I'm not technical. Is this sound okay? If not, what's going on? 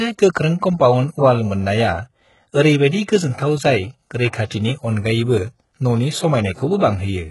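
No. The whole clip has the gritty, metallic treble of heavy HE-AAC compression, most likely from a low-quality streaming or voice codec. Nothing is left above 11.5 kHz, so s sounds come out lispy. There's also a brief pre-echo from 4.45 to 4.51 s: a short hiss creeps in about 57 ms before a sharp sound, making that attack smeared and soft.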